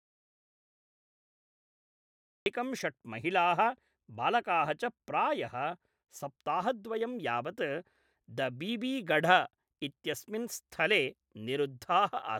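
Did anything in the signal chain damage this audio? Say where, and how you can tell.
Yes. The speech opens with an audio dropout to silence already under way, running from the start to 2.46 s: silence with no room tone, then the talker enters mid-flow. That points to a lost input, likely a disconnected device or dropped link, while the recorder kept writing silence.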